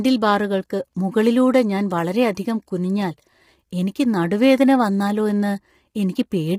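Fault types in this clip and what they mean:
Low-delay AAC compression: The speech sounds rough and grainy the whole way through, with a hiss filling the gaps between the harmonics and a top end that feels thin and somewhat artificial. That's likely AAC-ELD, the low-delay codec used in video calls. Its very short frames can't separate pitch harmonics cleanly, and here the damage is heavy, which fits a bitrate of about 24 kbps. That's too few bits to keep the voice smooth.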